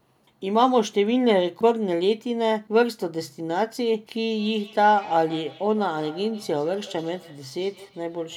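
From 4.38 s to the end, feedback echo between two devices appears. Each word returns roughly every 150 ms, at about 20 dB below the speech. A nearby device replays this microphone's sound, and the local echo canceller cannot remove it.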